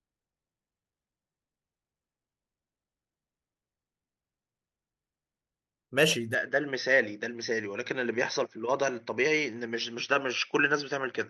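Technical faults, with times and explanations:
6.35 to 11.29 s, input switched to a poorer device: from 6.35 s to the end the speech abruptly loses its top end, with nothing above 6.2 kHz, so it turns duller with no gap at the change and no jump in loudness. A faint new background noise, roughly 55 dB below the speech, comes in at the same moment. The cause is likely the recording input changing to a narrower-band microphone or headset path.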